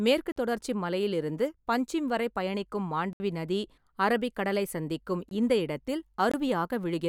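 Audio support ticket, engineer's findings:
Block of digital silence at 0.32 s (43 ms), 3.13 s (70 ms), 5.29 s and 6.32 s (21 ms each). Output buffer probably underrunning, with three gaps fitting 1024/2048-sample blocks.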